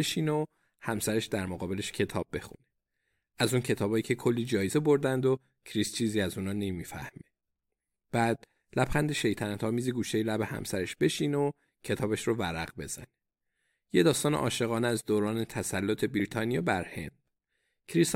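At 4.69 s and again at 16.19 s, damaged data in a compressed stream corrupts part of the encoded speech, so the decoder misreads the affected frame, loses its place in the bitstream and has to hunt for the next valid frame header before it can resume. Each event is very brief, about 14 ms, and comes through as a short chirp, squawk, click or brief hole cutting across the speech.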